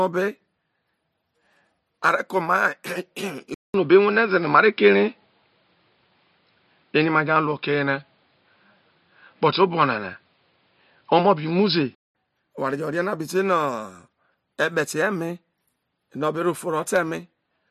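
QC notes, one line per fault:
3.54–12.15 s input switched to a poorer device, likely: 200 ms waveform gap, then boxy sound, level shift, faint background noise; spectrogram empty above 5.3 kHz.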